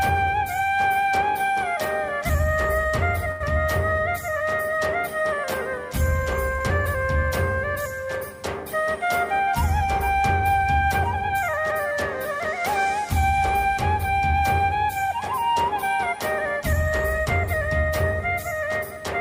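At 3.31 to 3.42 s and again at 6.58 to 6.62 s there is a short stall from a late packet. The receiver's jitter buffer ran dry and held the last sound for about 90 ms, then 27 ms, before resuming where it left off. Nothing is lost, but the sound hangs unnaturally with a faint buzz or dip.

Jitter buffer speed-up runs from 11.34 to 11.73 s at 108 % and from 15.99 to 17.26 s at 107 %. The receiver trimmed surplus buffered audio by cutting tiny pitch-period slices, removing about 40 ms and then about a tenth of a second. The audio sounds briefly hurried with unchanged pitch.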